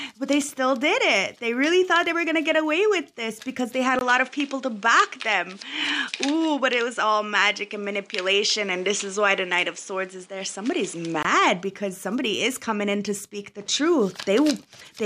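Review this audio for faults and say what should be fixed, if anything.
The recording's input most likely switched to a poorer device at 3.99 s and back at 11.25 s. A brief gap of about 20 ms marks the changeover. While the other device is active, nothing comes through above 10.5 kHz, so the sound turns duller and boxier, and a new background noise floor appears, around 35 dB below the signal. The overall level stays roughly the same. Lock the input to a single device for the whole recording and disable automatic device switching.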